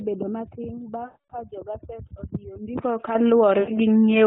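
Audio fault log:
1.06–1.33 s, lost AMR speech frames: a 0.24 s gap, fitting about twelve 20 ms frames. The decoder stretches the last sound and fades it before "jogaset odiyo ndiko".
3.15 s, microphone volume stepped up: just after "jogaset odiyo ndiko", voice and background jump together by about 6 dB. The input volume was raised in one step.
3.60–3.71 s, lost AMR speech frames: a shorter 0.08 s dropout, fitting four frames. The sound is drawn out and fades, then returns rough for a moment.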